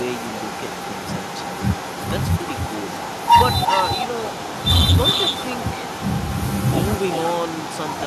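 Echo with no canceller runs throughout: a far-end loudspeaker feeds a microphone, returning the speech roughly 0.4 s later, a thin copy about 8 dB quieter. Hard clipping hits from 3.31 to 3.57 s and 4.68 to 4.98 s, where peaks overdriven by about 9 dB and 8 dB are cut flat.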